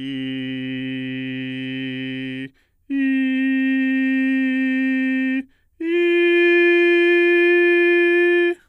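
No technical faults are audible anywhere in the music.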